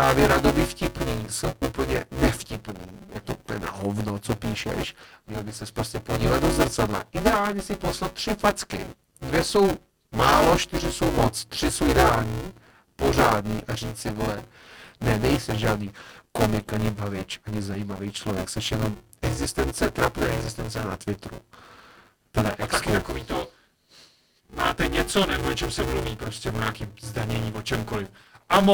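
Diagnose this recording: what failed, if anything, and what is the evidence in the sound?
The driver or buffer stage failed: buffer tearing runs through the whole speech clip as a robotic 200 Hz buzz that appears only while someone is talking and vanishes in pauses. The writer and the hardware reader of the ring buffer have slipped, so roughly a third of each 5 ms period replays audio from about 10 ms earlier, spliced in with hard joins. A spectrogram shows vertical stripes every 5 ms and a 200 Hz harmonic comb confined to speech, and the waveform shows step discontinuities at each join.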